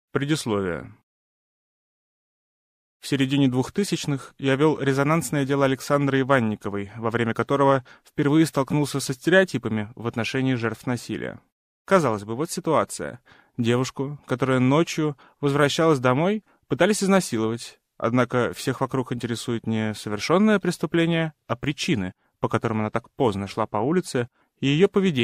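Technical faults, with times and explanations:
No technical faults, with times and explanations, can be given, as none are present.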